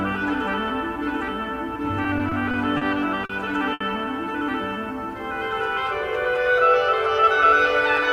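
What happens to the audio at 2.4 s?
At 2.4 s the audio is in the middle of repeated stalls (stutter), running from about 2.03 to 2.83 s. The packets arrived too late for playback, so the jitter buffer emptied five times and the receiver stretched the last sound to cover each wait, about 100 ms in all, the longest pause 40 ms. Unlike packet loss, nothing is skipped: the sound hiccups and drags behind, with no gaps in its content.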